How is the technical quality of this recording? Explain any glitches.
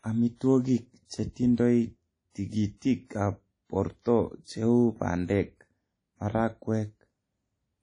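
The recording has audible damage from lossy compression, present throughout. It sounds like WMA compression at a low bitrate. Nothing is heard above 10.1 kHz. A transform codec splits the sound into long blocks and coarsely quantises each one. The resulting noise smears over tens of milliseconds, and weak components are dropped. The speech rings and sounds washy, with hiss that rises and falls with the sound. This fits roughly 32 kbps.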